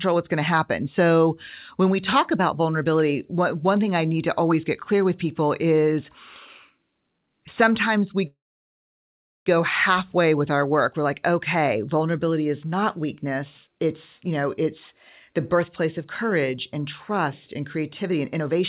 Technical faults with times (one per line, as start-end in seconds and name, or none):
8.27-9.49 call audio freeze
13.67-13.87 jitter buffer speed-up
14.28-14.67 jitter buffer speed-up
15.30-15.58 jitter buffer speed-up
16.05-18.60 jitter buffer speed-up